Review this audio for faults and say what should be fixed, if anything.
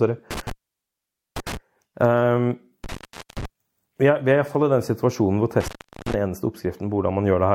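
Intermittent contact cuts the speech out three times: 0.31–1.57 s (open for 0.85 s), 2.84–3.45 s, just before "vi er" (0.45 s), and 5.60–6.14 s, right after "den situasjonen hvor" (0.38 s). A loose plug or cable briefly breaks the connection, so each gap starts and ends with crackle and leaves faint hiss. A digital dropout, by contrast, gives clean silence. Reseat and secure the connectors, and replace any worn cable.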